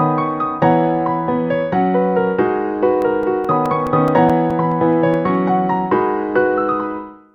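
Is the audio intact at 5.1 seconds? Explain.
No: CD scratch ticks run from 3.02 to 5.35 s. A scratch defeats error correction once per revolution, leaving about five few-millisecond ticks each second.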